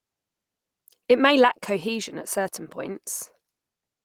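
No technical faults are audible.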